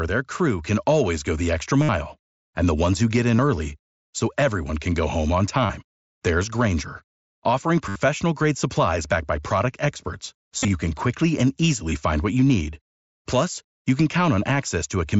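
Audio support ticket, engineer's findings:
Concealed Bluetooth headset packet loss. Buzzy tone held at full level, brief warble as real audio resumes. Unlike a plain dropout, the level never falls to silence.

1.82–1.89 s after "always go the extra". 3.37 s. 5.67–5.70 s. 7.89–7.96 s before "grade supplies backed by". 10.57–10.68 s between "backed by product experts" and "can quickly and", scattered gaps, longest about 37.5 ms. 11.90 s.

Headset radio link dropping voice frames. The receiver fills each gap by repeating the best-matching recent stretch of waveform.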